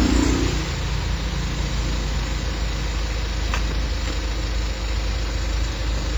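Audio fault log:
Throughout: WMA compression, likely. The sound rings and smears, with hiss that breathes along with it. Such heavy damage fits an early WMA encoder near 24 kbps.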